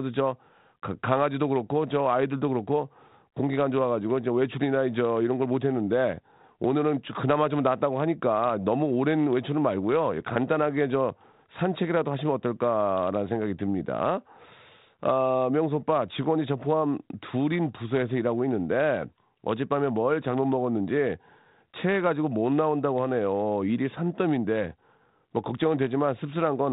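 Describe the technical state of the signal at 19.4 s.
At 19.4 s the speech is intact, with no fault at that moment, only the normal band-limited character of the 32 kbit/s G.726 ADPCM path.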